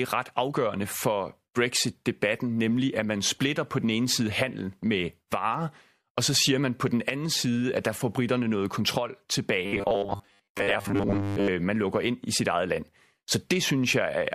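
Right after "får britterne noget kontrol", from 9.66 s to 11.48 s, the speech turns into robotic sound from repeated short buffers, a rigid metallic buzz pitched at 100 Hz that only loosely tracks the syllables until "man lukker ind i". The likely cause is audio arriving too slowly, with the playback side looping a 10 ms slice to fill each gap. Around 70% of the material in that span is repetition rather than new signal, so much of it is lost.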